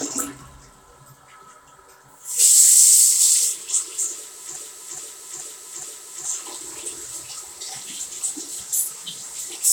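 A stall in the player or stream likely kept resending its last fragment, so this sound recording falls into a broken-record loop: a 0.42 s piece repeats four times from 4.56 to 6.25 s, replacing the audio due there.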